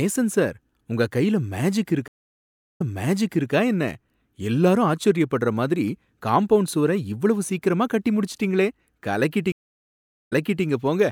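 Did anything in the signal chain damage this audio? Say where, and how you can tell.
Yes, at the network stage: two stream reconnects. After "கையில மேஜிக்", speech goes silent for 0.72 s (2.08–3.52 s), then resumes 0.72 s earlier; at 9.52–10.65 s, 0.79 s of silence, rewinding 0.34 s. Each time the connection dropped, and a fresh decoder restarted from resent, earlier data.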